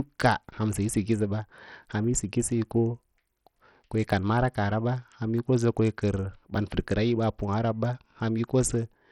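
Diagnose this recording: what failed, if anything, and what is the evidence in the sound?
The codec stage is where this failed, most likely Bluetooth SBC compression, applied throughout the speech. Nothing remains above 16.2 kHz, and the upper range sounds gritty and unstable, with heavy coarse-quantisation damage. On a spectrogram the top band flickers in and out as patchy blocks, with a grainy noise floor under the strongest energy. The starved bit allocation across SBC's sub-bands points to a small bit pool near 64 kbps.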